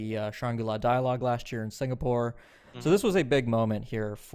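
A short speech recording with no technical faults to be heard anywhere in it.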